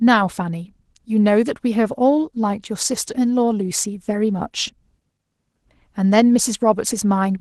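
Opus voice compression runs throughout the speech, plainly audible. The lower band is coded by linear prediction with a coarse excitation, and a thin transform layer covers the top, which fits roughly 16 kbps. The result sounds hoarse and slightly robotic.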